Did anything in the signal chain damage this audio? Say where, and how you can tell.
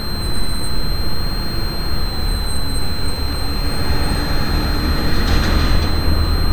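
Yes. A switching power supply feeding the analogue stage is leaking into the audio, leaving a switching supply whistle. Throughout the clip, a thin high tone of roughly 4 kHz wanders between 4.07 and 4.20 kHz, sitting roughly 15 dB below the sound as the supply's load shifts.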